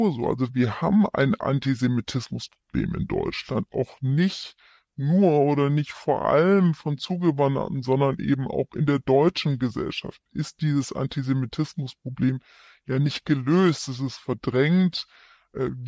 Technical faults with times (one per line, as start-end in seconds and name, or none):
0.00-15.88 wrong sample rate